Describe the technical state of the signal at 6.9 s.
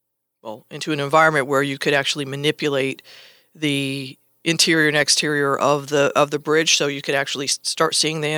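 At 6.9 s the speech is intact, with no dropout, distortion, glitch or other fault at that point.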